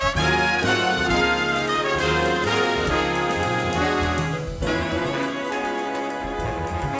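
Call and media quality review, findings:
No faults found in the music signal, with level, timing and frequency content behaving as expected throughout.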